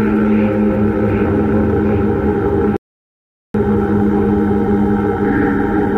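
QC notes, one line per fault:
2.77 to 3.54 s, rebuffering stall: playback halts into silence for about 0.78 s, then picks up exactly where it stopped because the player ran dry of downloaded audio and waited. Unlike a dropout, no material is skipped; the gap simply adds time.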